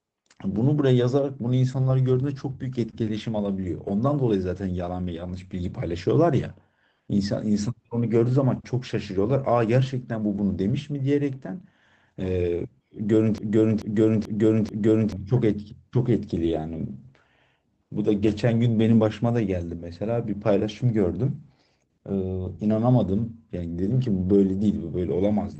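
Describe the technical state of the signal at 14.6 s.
At 14.6 s you're right inside a broken-record loop running from 13.38 to 15.12 s. A 0.44 s slice of the audio repeats four times back to back, likely because the player or stream stalled and kept resending its last buffer, so the real audio for that stretch is gone.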